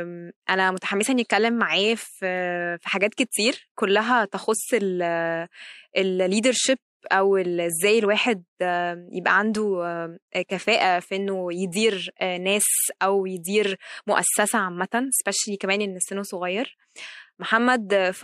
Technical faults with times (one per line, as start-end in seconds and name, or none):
0.12-18.12 clock slip clicks